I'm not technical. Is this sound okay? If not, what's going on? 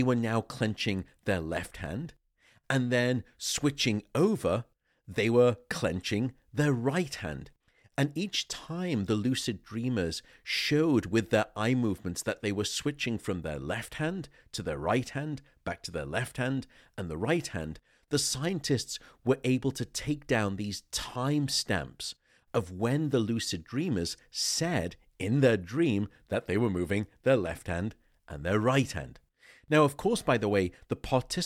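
No. From 13.49 to 16.29 s, after "they were switching from" and before "hand and the right", crude rate conversion adds a gritty, off-key fizz. Unlike clipping, it isn't harsh crackle on loud peaks.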